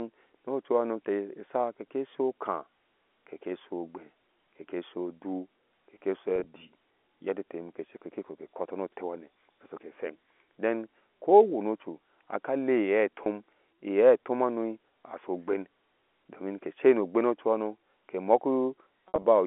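Speech that briefly turns held and buzzy at 6.36 to 6.51 s, at 13.24 s, and at 19.08 to 19.24 s, where a 60 ms stretch dips toward silence. This is packet loss with pitch repetition: the receiver looped the last pitch period over missing 20 ms chunks of the telephone-band G.711 stream.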